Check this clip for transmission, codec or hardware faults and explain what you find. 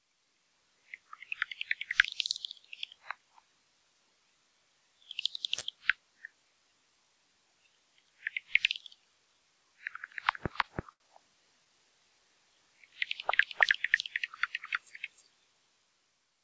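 Two kinds of fault turn up in this recording of everyday sounds, both in its last 6.3 seconds, while the call path's G.722 coding holds everything below 8 kHz throughout.

Doubled audio track, from 10.14 s to the end: a second copy of the full-band signal is mixed in, most likely from a slower capture path picking the audio up again. The copy runs roughly 300 ms behind at about the same level. Because it has no decay or room colouring, it sounds like a crisp, equally loud repeat of every sound rather than reverberation. It switches on abruptly at 10.14 s and stays until the clip ends.

Short stall from a late packet, at 10.61 s and from 10.93 to 11.09 s: each time, a packet arrived late, the jitter buffer ran dry, and the receiver extended the last sound it had until the data came in. It then resumed where it left off, so nothing is lost. The first gap needed 19 ms of fill and the second 72 ms. 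Both moments are heard as a sound held slightly too long, with a faint buzz or dip.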